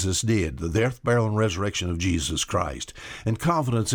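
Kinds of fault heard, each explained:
Nothing here counts as a fault; the speech comes across without any dropouts, distortion or glitches to explain.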